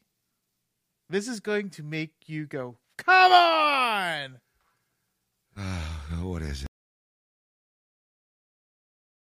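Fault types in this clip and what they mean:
Audio dropout to silence: from 6.66 s, right after "what is", the speech cuts off mid-flow into silence with no room tone for the final 2.6 s, likely because the input was lost while the recorder kept writing silence.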